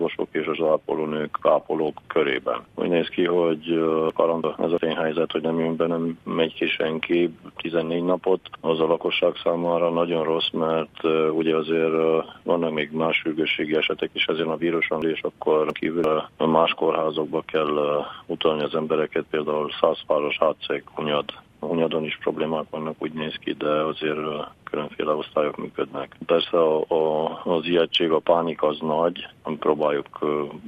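Chunks out of order occur at 4.10–4.78 s, where one 0.34 s chunk plays a chunk late, and at 15.02–16.04 s, where a chunk arrives two late. Nothing is missing, but the sequence jumps, producing a brief jumbled passage.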